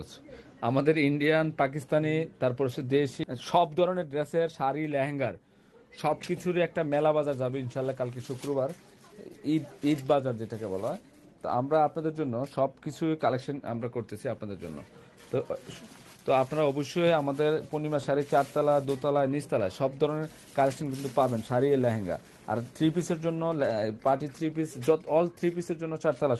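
At 3.23 to 3.25 s the audio makes a skip ahead: roughly 0.7 s of sound was dropped in transit or discarded by an overflowing jitter buffer. The two sides are joined almost directly, with no silence, which distinguishes this from a dropout that leaves an audible gap.

From 3.33 to 5.70 s a jitter buffer speed-up follows. To reduce the extra delay, the receiver repeatedly removed pitch-period-sized slices, about a third of a second in total, so the audio runs at 110% speed. Pitch stays unchanged, unlike a resampling speed error, which would raise it.

The high end stops near 12 kHz, consistent with an Opus call path at a modest bitrate.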